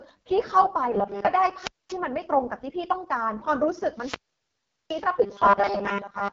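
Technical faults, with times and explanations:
Throughout, AMR wideband (HD Voice) codec: the speech has a heavy rough, raspy grain, and nothing is present above 7.2 kHz. This fits AMR-WB running at its lowest rate, around 6.6 kbit/s. At that rate the pulse-driven model of the vocal tract has too few bits to rebuild the voice faithfully. The top band, which is filled with shaped noise and not coded detail, adds a hissy edge in place of real treble.
0.92 to 1.27 s and 5.22 to 6.33 s, robotic sound from repeated short buffers: in both stretches the speech turns into a rigid metallic buzz at 200 Hz that only loosely follows the syllables. The likely cause is audio arriving too late, with the player looping the last tiny slice to fill the gap. A 200 Hz buzz fits a 5 ms slice. Most of the sound in these spans is repeats, and the real audio is skipped.
1.59 to 1.98 s and 3.93 to 5.08 s, wireless microphone squelch dropout: in each span the signal frays into a rise of hiss and static, then drops into near silence before the speech returns. 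The silent hole lasts about 0.23 s in the first dropout and about 0.76 s in the second. The analogue FM radio link faded enough that the receiver's squelch muted its output and reopened only once the signal recovered.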